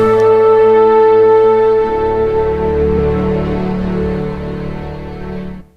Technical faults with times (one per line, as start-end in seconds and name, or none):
5.60-5.62 damaged data in a compressed stream